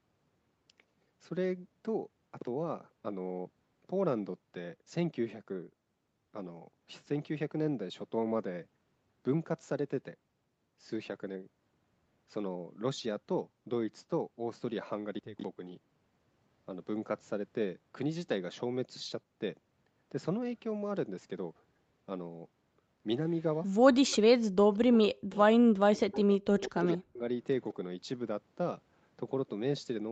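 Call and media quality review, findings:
Speech suppressed in double talk, 23.85–24.69 s, 25.10–25.51 s, 25.71–26.21 s, 26.64–27.23 s. Likely cause: echo canceller unable to separate the near talker from loudspeaker echo during overlap, so it attenuates everything. Speech dips by up to about 40 dB, chopping away roughly 0.3–0.7 s per burst and leaving fragmented gaps.

Echo leak, 25.34–25.39 s and 26.33–26.37 s. Likely cause: the far-end echo canceller misses part of its loudspeaker pickup, which is returned to the call. Faint delayed copy of the talker 178 ms behind, about 40 dB and about 25 dB below speech, brief scraps, the first within a suppression burst.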